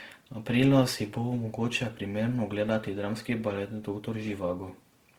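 From start to finish the speech carries plainly audible Opus compression damage, likely from encoding in the codec's music (CELT) mode at a low rate, which fits something near 16 kbps. Bands starved of bits have been filled with folded copies of lower bands or with noise, so the voice sounds rough and grainy rather than swirly. The bandwidth stays full, extending to about 20.2 kHz.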